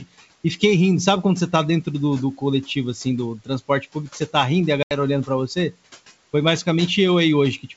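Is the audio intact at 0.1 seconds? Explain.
No. From 0.00 to 0.24 s the noise suppressor cuts into the speech. It mistakes the quiet onset for noise and turns it down, by about 18 dB at worst. Roughly a tenth of a second sounds swallowed and faint.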